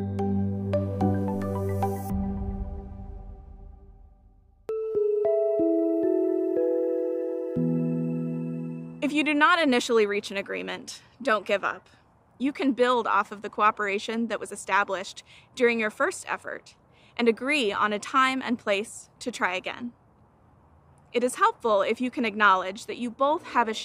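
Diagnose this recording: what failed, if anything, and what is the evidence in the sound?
Nothing stood out on listening, and there is no audible sign that any stage of the chain failed.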